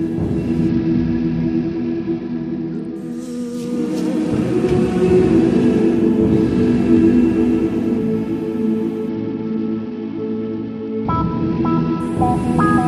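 A Bluetooth SBC bit pool drop hits this audio twice, from 0.69 to 2.96 s and again from 9.09 to 12.00 s. On a congested link the sender cut the encoder's bit budget, the sound pointing to a fall from a bit pool near 31 to one near 9, roughly 72 kbps. Starved of bits, the upper sub-bands get little or nothing and the rest are quantised coarsely, so the treble dulls and a gritty noise rises until the rate recovers.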